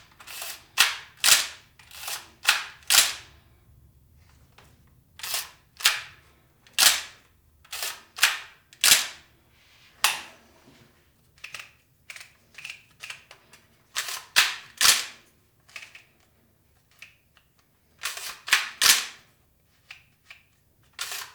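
No technical faults occur in this recording, so there is nothing to describe in time order.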